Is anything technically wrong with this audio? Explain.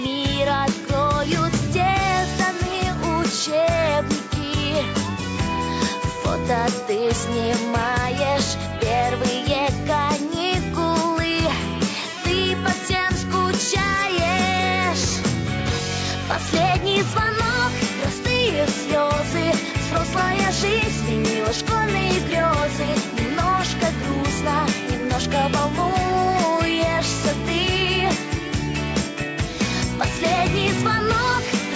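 No, nothing's wrong here; the audio has simply been through a call's microphone processing, so the lowest bass is trimmed away and nothing reaches above about 8 kHz, which is just how that path normally sounds.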